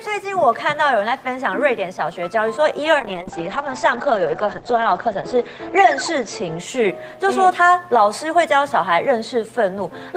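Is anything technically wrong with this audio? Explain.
Yes. A call bitrate drop runs from 3.0 s to 7.69 s. The call's bandwidth estimate fell, so the encoder was told to spend far fewer bits, consistent with a fall from around 32 kbps to roughly 9 kbps. With so few bits, the sound is quantised coarsely and the top end is cut, from 20 kHz down to 8 kHz. The audio turns muffled and rough, with a watery texture that is worst for about 1.88 s before the bitrate recovers.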